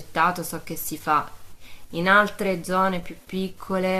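Nothing stood out as a technical problem anywhere in the speech on listening.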